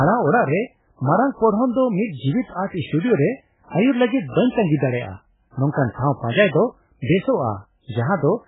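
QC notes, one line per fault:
Throughout, MP3 compression: the speech is band-limited with nothing above 3.8 kHz, a hard flat ceiling on the spectrogram, and heavy swirly, watery smearing from lines flickering frame to frame, which likely points to a very low bitrate around 8 kbps.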